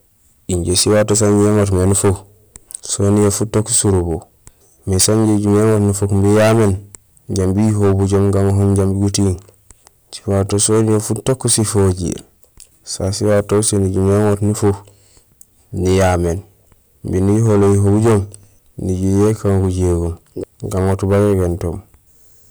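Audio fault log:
throughout, hard clipping: a harsh, buzzing fuzz rides on every loud syllable of the speech, with a gritty edge on vowels and stressed sounds rather than occasional crackles. The signal reaches a stage driven about 14 dB past what it can pass, so its peaks are sliced flat. Roughly 7 percent of the waveform sits on that ceiling, and the squared-off tops spray harmonics high into the spectrum, which the ear hears as distortion.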